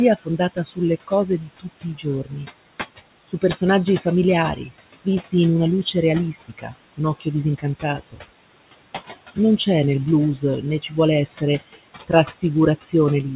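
Noise suppressor artifacts run through the whole recording. A suppressor pulls down the room noise by about 19 dB wherever it judges a band to be steady background, deciding frame by frame. The room noise, sitting about 14 dB under the speech, therefore drops away in the gaps and comes back beneath each phrase. The voice sits inside a band that stops at 4 kHz, which fits a G.711 A-law call path.

Speech cut by the noise suppressor appears from 0.16 to 2.33 s, from 3.28 to 8.2 s, and from 10.36 s to the end. In these stretches the suppressor mistakes quieter parts of the speech for noise and turns them down along with the background, by about 18 dB at worst in the first and last spans and about 22 dB in the middle one. The cuts add up to well under a second in the first span and around a second in the second. Soft consonants and word endings sound swallowed or faded.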